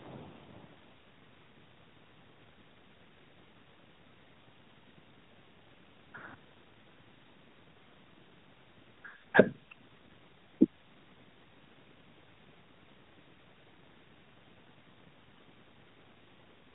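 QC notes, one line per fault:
No faults to log in this speech recording. The room's background noise rises by about 17 dB at roughly 9.5 s but stays about 30 dB below the speech, and the AMR narrowband mobile codec holds everything under 4 kHz with a light coding character that fits its 12.2 kbps mode.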